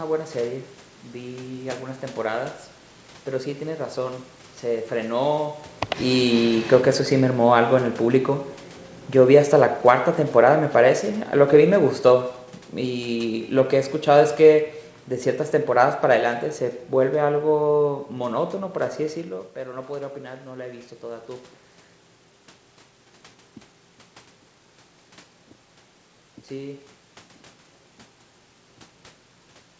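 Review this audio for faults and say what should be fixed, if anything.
Automatic gain falling from 9.19 to 12.4 s: the automatic gain control judged the input too loud or its background noise too strong and pulled its gain down by about 4 dB over roughly three seconds, so the speech and the room noise behind it sink together. To prevent it, set the microphone's input level lower so the gain control has no reason to step in.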